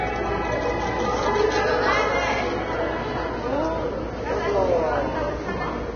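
From start to finish the sound is hissy and grainy, with nothing above about 6.5 kHz, roughened tones and smeared attacks. This is most likely heavy Vorbis compression. The encoder has lowered its cut-off and quantised the remaining treble so coarsely that fine detail has turned into noise of similar energy sitting on the spectral floor. The degree of damage fits a bitrate of around 19 kbps.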